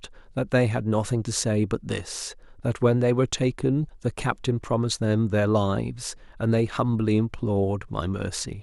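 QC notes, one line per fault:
No faults found in this clip.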